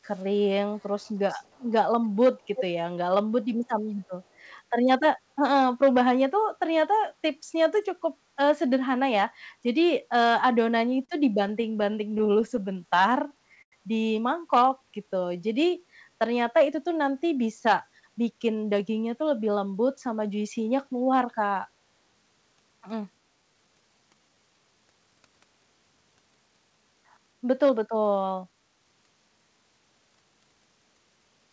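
Right at the start there's a faint trailing copy of the sound, 315 ms behind. It's likely an echo leak, from a far-end speakerphone whose canceller let some through. It shows up at 0.09–0.24 s (barely there), 0.79–1.63 s (faint), 2.55–2.63 s (nearly as loud as the original) and 4.49–4.53 s.

From 10.79 to 13.73 s you get repeated stalls (stutter): the jitter buffer kept running dry, so the receiver stretched the last sound across 16 short holds, the longest 95 ms. It drags and hiccups, though nothing's actually lost.

At 14.69–16.11 s there's a jitter buffer slow-down. Pitch periods get repeated to rebuild the reserve, so it plays at about 90% speed, same pitch, adding 146 ms. That same drawn-out feel comes back at 22.89–24.60 s, at 91% with 161 ms added.

The jitter buffer speed-up at 17.86–20.46 s trims small pieces to shed excess delay. It runs about 108% fast, roughly 200 ms gone, and sounds a bit hurried. 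It happens again at 26.46–29.00 s, 109%, roughly 300 ms cut.

All of this comes through the G.722 call path at 64 kbps, with nothing above 8 kHz.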